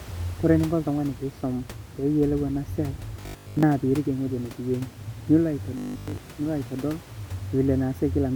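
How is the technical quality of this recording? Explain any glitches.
There are two short robotic glitches; the room noise sits about 20 dB below the speech. From 3.21 to 3.63 s, between "eena siai" and "peyie iriik", and again from 5.78 to 6.20 s, the voice turns into a rigid metallic buzz at 50 Hz. That's robotic sound from repeated short buffers, likely from late-arriving audio. The player loops roughly 20 ms chunks and skips most of the real signal, so the voice only loosely follows the words.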